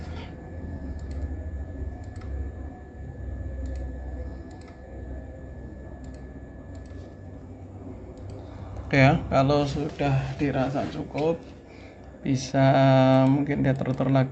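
No technical faults can be heard in this audio.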